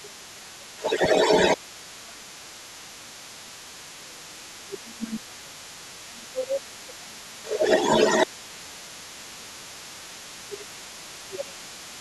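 Other side's voice leaking through is heard in this speech recording from 0.0 to 0.35 s, about 20 dB below the main talker, and again from 0.6 s to the end, roughly as loud as the talker. The far end is playing on a loudspeaker near the microphone, and the echo canceller has likely failed to subtract it, so a second voice runs alongside the first. Speech suppressed in double talk follows the leak closely, at 0.0 to 1.01 s, 1.57 to 3.53 s, 3.97 to 7.61 s, 8.33 to 10.06 s and 10.36 to 11.69 s. In these spans the talker dips by up to about 20 dB, and by about 15 dB in the 8.33 s stretch. With both sides talking at once, the canceller likely could not tell the near voice from the echo, so it turned both down together.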